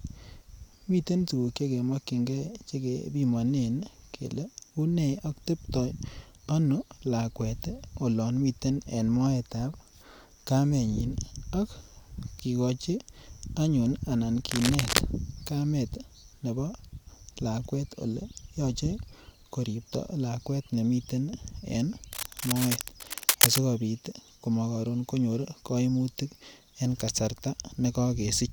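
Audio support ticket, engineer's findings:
Cable scratch noise, 14.51–14.99 s (about 0.5 s) and 22.12–23.58 s (about 1.5 s). Dense, irregular scratching and rustling over the speech, roughly as loud as the speech itself. Likely a worn cable, connector or pot being moved, its contact resistance fluctuating rapidly and injecting crackly noise bursts into the signal path. Check and reseat or replace the connector and cable.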